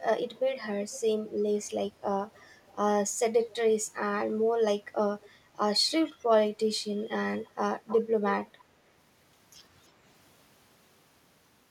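Speech with echo leak: a delayed copy of the voice trails the talker at 0.35 to 1.31 s, 2.35 to 2.75 s, 3.5 s, 5.2 to 5.3 s, 7.44 to 7.52 s and 7.87 to 8.65 s. The repeat lags by 343 ms, shifting to 313 ms from 7.44 s. It is mostly well below the speech but rises to about 10 dB below it in the final burst. The likely cause is a loudspeaker on one side of the call whose echo canceller is letting part of the returned signal through.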